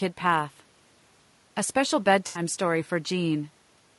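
Across the whole clip the speech has passed through what is likely low-delay AAC compression, AAC-ELD. Its short analysis frames cannot resolve the pitch harmonics finely, and the limited bit budget, which fits a rate of around 32 kbps, leaves too few bits to code them cleanly. The voice therefore sounds plainly rough and grainy, with noise filling the gaps between harmonics and a thin, somewhat synthetic-sounding top band.

From 2.27 to 2.41 s there is AAC frame loss with concealment. Some coded frames never reached the decoder, so it rebuilt the gap by reusing and reshaping the last good spectrum rather than decoding real audio. The missing stretch points to about 80 ms of lost material, which fits four dropped frames. It is heard as a brief smeared, noisy or phasey patch where the speech loses its definition before clean decoding resumes.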